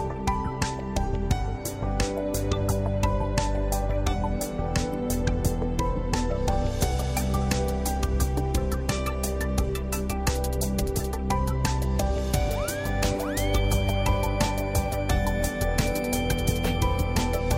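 No technical fault can be heard anywhere in the audio. Nothing in it points to a problem in how it was recorded, processed or played back.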